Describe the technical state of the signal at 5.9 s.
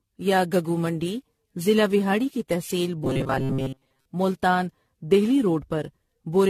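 At 5.9 s the speech sounds swirly, hollow and smeared, with blurred consonant attacks, as it does throughout the clip. This is likely generation loss: the audio seems to have been decoded and re-encoded around fifteen times with a lossy codec, in a way that fits AAC-LC at 64 kbit/s. Each pass quantised on a shifted frame grid, so the noise and spectral gaps accumulated beyond what one encode at that rate would leave.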